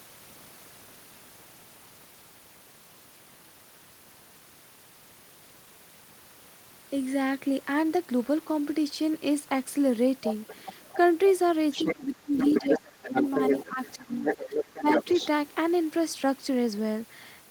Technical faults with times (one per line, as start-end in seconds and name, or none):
10.25-10.97 other side's voice leaking through
11.72-11.95 other side's voice leaking through
11.94-13.26 speech suppressed in double talk
12.38-15.28 other side's voice leaking through
13.65-14.87 speech suppressed in double talk